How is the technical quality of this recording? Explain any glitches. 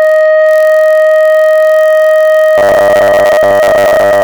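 The technical quality is poor: two faults are audible in this music recording.

Block size mismatch (padded), throughout the clip: one stage hands over blocks shorter than the next stage expects, and the shortfall in each block is filled with silence. The 43.1 Hz buzz fits a 1024-sample read block, with a brief zero gap in each one. The music plays at 0.999 times normal speed.

Robotic sound from repeated short buffers, from 2.58 s to the end: the music turns rigid and metallic, with a fixed 100 Hz buzz imposed on it while its overall shape still roughly comes through. The likely cause is audio arriving too seldom, so the player loops the most recent 10 ms of sound. Roughly 70 percent of that section is repetition, with the real material skipped.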